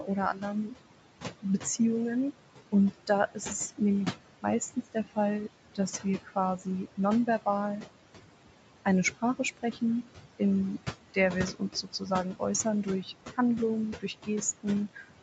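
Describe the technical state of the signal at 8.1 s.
At 8.1 s you're hearing noise suppressor artifacts, present across the whole clip: the suppressor pulls steady room noise down about 18 dB, so the noise sinks between the words and rises under them.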